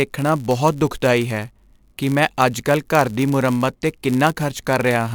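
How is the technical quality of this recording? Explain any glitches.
The recording has one fault running throughout: a block size mismatch (padded). One stage hands on blocks slightly shorter than the next reads, and zeros fill each remainder. Those tiny gaps repeat about 100 times a second, producing a steady buzz over the speech, which also runs about 0.4% slow.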